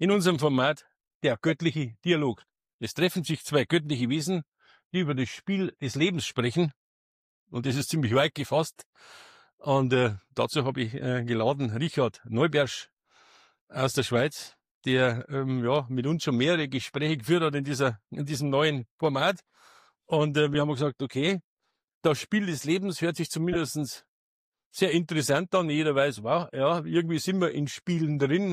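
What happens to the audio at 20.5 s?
At 20.54 s a corrupt frame is decoded: damaged bits in what sounds like a couple of compressed frames misplace energy, producing a brief blip peaking around -20 dBFS.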